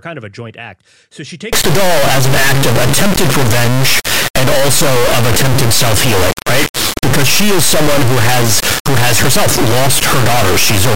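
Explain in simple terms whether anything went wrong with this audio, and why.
Something went wrong from 1.53 s to the end: an integer read as float fault. The speech samples were stored as whole numbers, which fits 32-bit integer audio, but the player treated those same bits as decimal numbers. That turns each sample into nonsense, either almost nothing or something enormous. From 1.53 s on, the speech becomes a harsh, extremely loud buzz that slams between silence and the loudest possible level, dropping out in the quietest moments.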